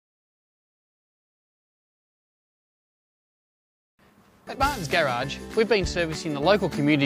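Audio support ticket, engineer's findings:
No faults found in this audio.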